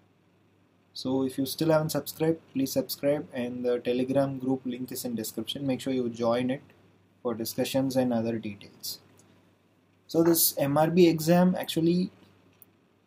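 No technical faults can be heard anywhere here.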